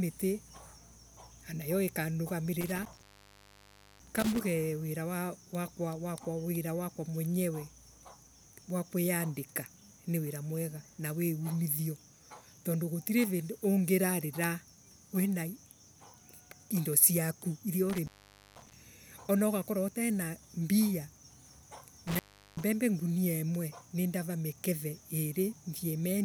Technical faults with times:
2.61-4.41 intermittent contact
17.90-18.74 intermittent contact
22.07-22.64 intermittent contact

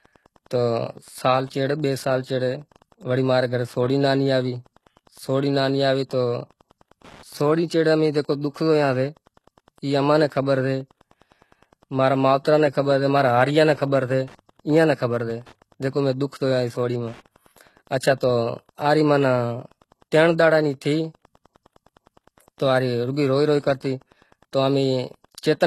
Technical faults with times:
0.00-25.66 Wi-Fi interference
0.00-25.66 HE-AAC compression

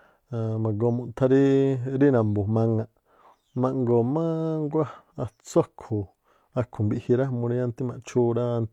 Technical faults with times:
none

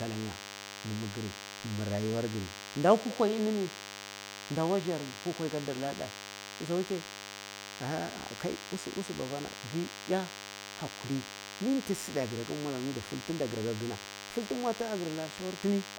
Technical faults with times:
0.00-15.98 DECT cordless phone buzz

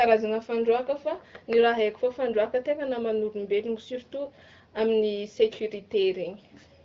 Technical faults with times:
none

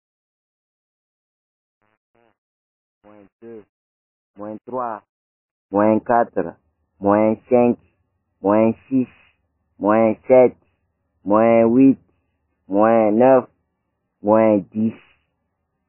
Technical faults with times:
0.00-15.89 MP3 compression

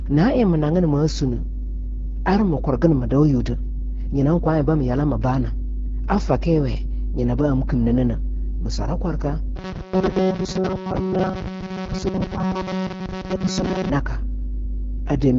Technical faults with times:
0.00-15.38 mains hum
0.00-15.38 AMR wideband (HD Voice) codec
9.56-13.89 robotic sound from repeated short buffers

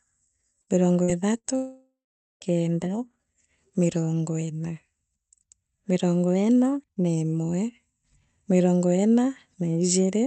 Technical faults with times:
0.61-0.70 burst of packet loss
1.03-1.11 burst of packet loss
1.38-1.47 burst of packet loss
1.56-2.44 long network dropout

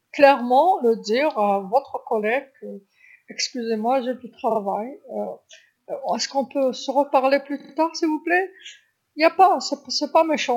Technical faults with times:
4.50-4.59 repeated frames
7.59-7.72 repeated frames

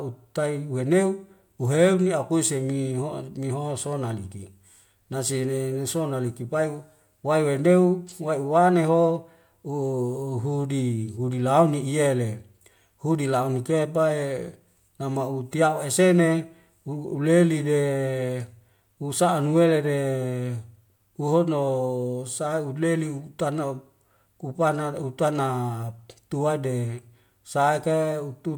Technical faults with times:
none

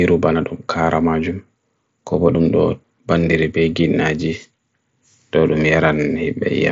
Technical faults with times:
none

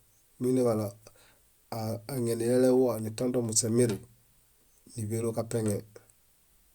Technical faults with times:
none

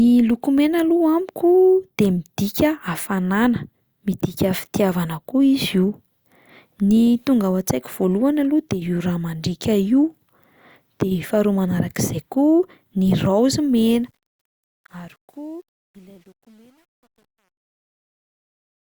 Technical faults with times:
13.91-18.85 truncation distortion on a fade

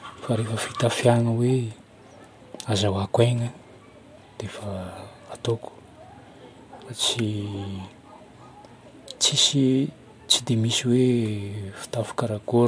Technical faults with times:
none

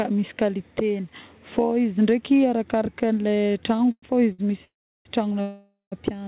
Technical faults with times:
3.76-4.40 repeated stalls (stutter)
4.64-5.07 call audio freeze
5.41-5.94 call audio freeze

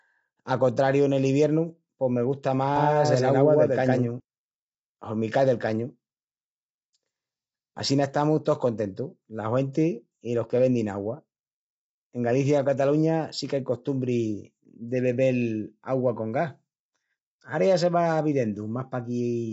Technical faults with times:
0.00-19.53 low-delay AAC compression
2.76-4.20 doubled audio track

